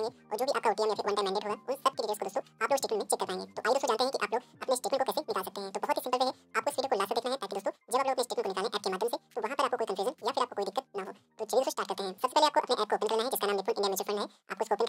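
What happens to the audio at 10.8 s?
At 10.8 s, as throughout the clip, the audio is read two samples at a time (double speed): each pair of samples is taken as one frame, so playback runs at 2x and an octave high, 12 semitones up.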